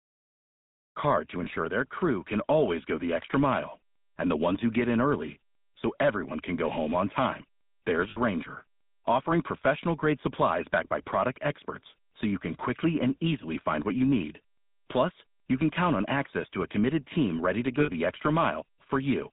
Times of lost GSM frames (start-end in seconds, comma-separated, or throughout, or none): 1.44-1.47, 8.10-8.17, 17.80-17.90